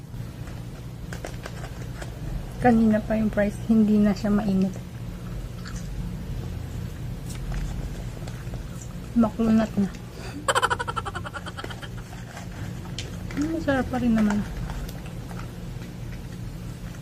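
DAB burbling at 4.22–4.49 s, 7.81–8.31 s, 9.48–9.78 s and 15.09–15.22 s. Bit errors corrupt sub-band samples, giving short blips of noise over the sound.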